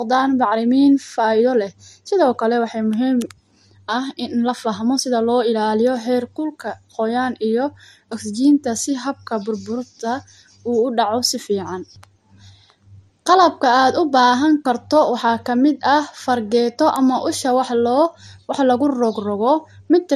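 Throughout the speech, the audio has likely been through transcoding between lossy codecs, first MP3 and then AAC-LC, with the second encoder re-coding the first one's damage. Nothing sounds above 14 kHz, and artefacts from both codecs are layered together.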